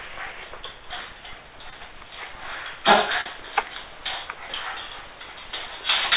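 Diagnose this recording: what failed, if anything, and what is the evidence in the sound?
Network stage: short concealed packet loss, a 20 ms smear at 1.70 s and a 40 ms one from 3.21 to 3.26 s, where the receiver extended the preceding sound.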